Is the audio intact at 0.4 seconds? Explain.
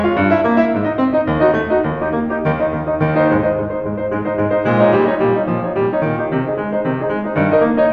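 Yes, the music is intact at 0.4 s, with no fault audible at that moment.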